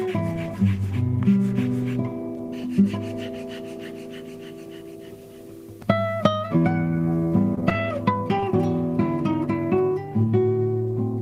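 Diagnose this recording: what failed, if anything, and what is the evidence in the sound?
Network packets went missing repeatedly between 7.55 and 7.77 s, producing repeated packet loss: several gaps of up to about 21 ms patched by extending prior sound, giving choppy texture with pieces missing.

A short concealed packet loss on the network hit 8.40 to 8.44 s, where about 20 ms never arrived and was filled by continuing the preceding sound, leaving a brief smear.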